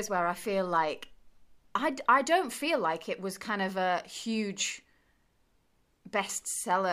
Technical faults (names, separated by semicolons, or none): none